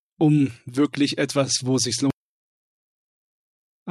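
No technical faults can be heard anywhere in the audio.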